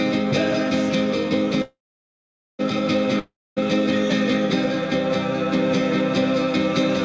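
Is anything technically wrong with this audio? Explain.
Yes, there are two interruptions, heard through a call path whose sound stops at 8 kHz, which fits the G.722 codec.

From 1.62 to 2.61 s there is a call audio freeze. Packets were likely held up on the way, so the jitter buffer ran empty. The receiver stretched the last sound into a fading buzz, then gave about 0.82 s of silence. The audio resumes where it left off, with nothing missing, but now 0.97 s late.

From 3.19 to 3.61 s comes a long network dropout. A stretch of audio likely never reached the receiver, which again filled the gap with a fading buzz before about 0.25 s of silence. When sound returns, about 0.38 s of it is gone, so it jumps ahead.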